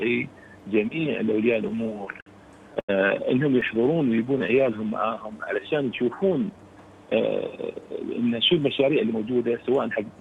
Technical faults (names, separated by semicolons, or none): repeated stalls (stutter); scattered short gaps; jitter buffer slow-down; jitter buffer speed-up